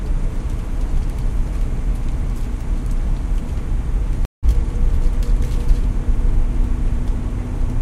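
At 4.25 s the sound cuts out for about 176 ms, returning at 4.45 s. This is a stream reconnect. The connection dropped, playback fell silent, and the player rejoined the stream with a fresh decoder. What separates it from a plain dropout is what follows the gap. Instead of continuing where it stopped, the audio picks up roughly a tenth of a second further on, so a short stretch of the sound is simply missing.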